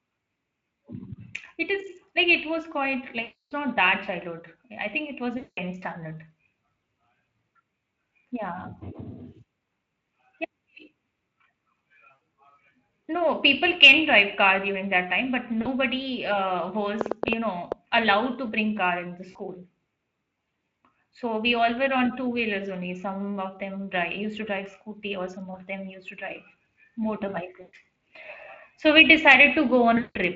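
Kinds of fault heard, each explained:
VoIP packet loss concealed by the speech codec: Seven gaps, lasting from about 40 ms to 300 ms and longest near 3.2 s and 5.4 s. Rather than dropping to silence, the decoder stretches the last sound into a buzzy, fading tone, and the voice stays weakened briefly once audio resumes.
Train of clicks: From 17.0 s to 17.7 s, about seven similar pops arrive unevenly, averaging 8.5 per second and peaking about 15 dB above the speech. They are sharp ticks with no fading tail, which sets them apart from concealment. Nearby interference or a faulty connection or power supply is the likely cause.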